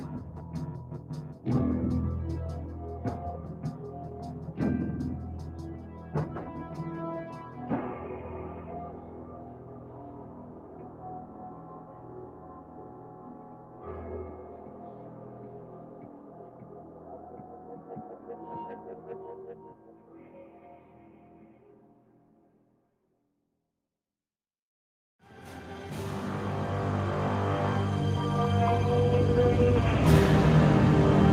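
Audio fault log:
Throughout: noise suppressor applied to music or sounds. A suppressor tuned for speech is still in the chain, and it's treating the steady, sustained parts of this audio as background noise. The sharp onsets get through fine, but anything held or decaying gets pulled down, with the level swinging by about 10 dB as the processor keeps deciding what's signal and what isn't. That's why it pumps and thins out, and the tails and ambience keep ducking away instead of ringing naturally.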